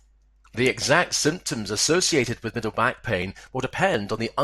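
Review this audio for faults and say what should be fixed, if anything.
Right after "exact symptoms", 1.78 s to 4.18 s, you get periodic USB or driver dropouts: about ten ticks every 0.24 s, each skipping roughly 10 ms as something stalls the bus or driver. Kill that background task or isolate the interface's USB port.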